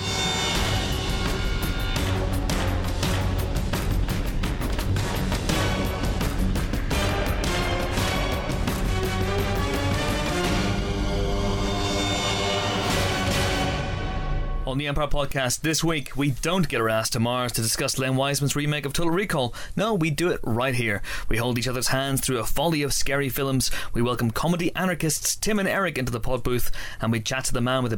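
No technical faults can be heard anywhere in this audio.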